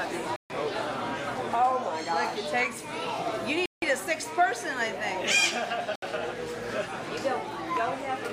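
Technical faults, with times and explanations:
0.36–0.50 s, 3.66–3.82 s and 5.96–6.02 s, Bluetooth stall: the sound drops to dead silence three times, for about 140 ms, 165 ms and 67 ms, then carries on. These are clean holes rather than crackles or smeared dropouts, and that most likely means radio interference held up the wireless packets long enough for the headphones' small buffer to run empty. Playback simply waits until the resent data turns up.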